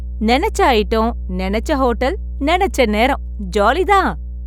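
From start to finish, a mains hum sits under the speech: a steady low tone at 60 Hz, not far below the speech level, roughly 10 dB down. Power-line current is leaking into the signal, likely through a ground loop or a nearby transformer. Unlike rumble or handling noise, it holds one fixed pitch with a few low harmonics and never changes with the talker's pauses or loudness.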